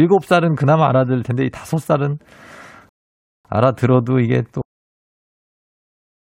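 A speech recording with two playback faults. From 2.89 s to 3.45 s there is a rebuffering stall: the sound stops dead and sits in silence for about 0.56 s, then picks up exactly where it left off. The player ran dry of downloaded audio and waited for more to arrive. What separates this from a dropout is that nothing is missing. The speech resumes mid-stream with no skipped material, so the gap only adds time. A dropout would replace part of the signal with silence. The second fault is a cut-off end at 4.62 s. The speech breaks off in the middle of a sound and drops straight to digital silence, which holds for the rest of the clip. The final buffers were never written or played out. Unlike a natural ending or a fade-out, there is no decay and no trailing room sound, just an abrupt stop partway through.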